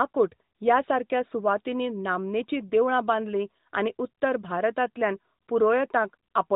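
There are no technical faults in this speech clip to describe in time order.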